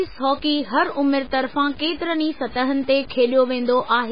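Across the whole speech clip, the quieter parts turn gritty and grainy, and the grain shifts with the sound itself rather than sitting as a steady hiss. The softest moments and trailing ends sputter or drop out entirely. This is likely low bit depth without dither: the samples were cut to very few levels, consistent with about 6 bits, and simply truncated. The resulting error of roughly 25 dB below the signal tracks the sound instead of being smoothed into noise.

Layered over that, also from start to finish, the sound is dull and watery, with a swirling, metallic shimmer and smeared onsets. Nothing is present above 5 kHz, so sibilance and brightness are gone, and the remaining detail flickers unstably. The likely cause is heavy MP3 compression at a very low bitrate, consistent with around 16 kbps. Starved of bits, the encoder chopped off the treble at a fixed point and zeroed weak frequency components, which switch on and off from frame to frame.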